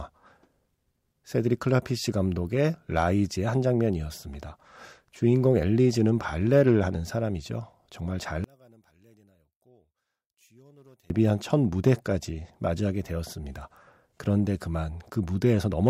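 From 8.44 to 11.10 s the speech almost disappears, dropping about 35 dB, likely from one channel inverted, cancelling the shared centre content on mono summing.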